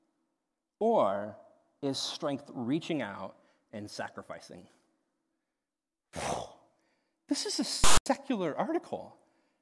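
At 7.84 s, just after "is a", file tags played as audio cut in for about 0.22 s. Metadata text was read as samples, giving a hard-edged rasp biased to one side before the zero padding falls silent. That lopsided rasp separates it from full-scale white-noise corruption.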